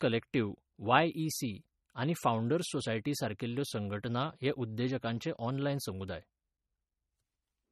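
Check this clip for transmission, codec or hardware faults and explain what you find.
MP3 compression artefacts run throughout the speech. The treble stops dead at 13.1 kHz, and the remaining sound has a plainly audible watery, swirly texture with chirpy sibilants, which points to a likely MP3 encode at a low bitrate around 32 kbps. Starved of bits, the encoder discards the top band and zeroes weak frequency lines that flicker on and off between frames.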